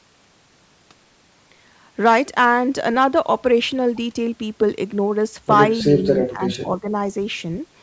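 From 5.84 to 6.88 s, the echo canceller likely could not tell near-end talk from loudspeaker echo while both sides spoke, causing speech suppressed in double talk: the speech is turned down in patches, dipping by up to about 15 dB for roughly half a second altogether.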